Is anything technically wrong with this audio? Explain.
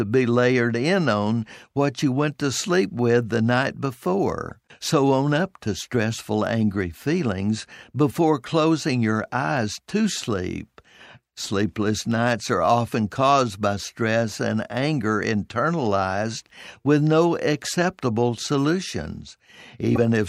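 Yes, there are two kinds of fault. From 4.48 to 4.51 s and again from 19.95 to 19.98 s, the speech skips ahead with a brief chirp or noise burst lasting about one 26.1 ms frame. This is likely a broken MP3 bit reservoir: frames were lost, so the next frame borrowed bytes from the wrong data.

From 6.39 to 10.32 s, a faint hiss and roughness ride on the speech, strongest on loud and sibilant moments and gone in pauses. This is sample clock jitter. The converter's timing wanders by roughly half a microsecond, leaving an error about 50 dB below the signal.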